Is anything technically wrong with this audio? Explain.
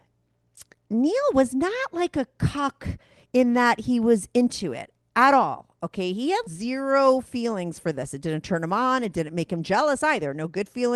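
No, nothing is technically wrong with this speech; it has passed through a WebRTC call path whose top end stops around 12 kHz, consistent with Opus at a moderate bitrate near 32 kbps.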